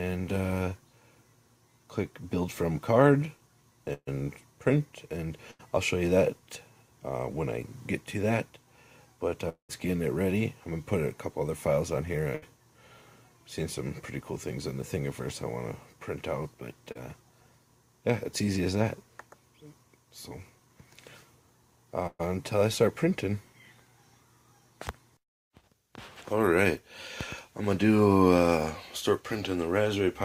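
Bursts of packet loss at 3.93 to 4.09 s, 5.51 to 5.61 s, 12.35 to 12.44 s and 22.07 to 22.21 s mean runs of packets arrived too late or not at all, removing 140, 80, 80 and 120 ms. The receiver extends the last sound into a fading buzz or hiss, which drops to brief silence at 3.93 and 22.07 s, before resuming further on.

At 9.49 to 9.71 s the stream stops for about 200 ms, likely a long network dropout. The last sound is stretched and faded, then about 110 ms of silence follows before the audio returns with that stretch missing.

Short concealed packet loss at 16.92 to 16.97 s drops 40 ms before decoding. The gap is filled by continuing the preceding sound and blending back, heard as a quick smear or wobble.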